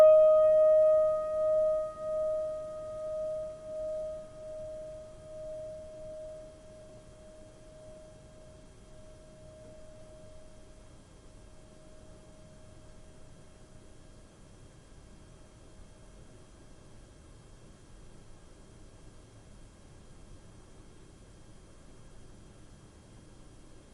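Frames out of order at 6.81 to 6.98, 9.93 to 10.10, 15.63 to 15.68 and 20.31 to 20.40 s: two neighbouring blocks of about 80, 80, 20 and 40 ms got swapped, so each spot flutters briefly, though no time goes missing.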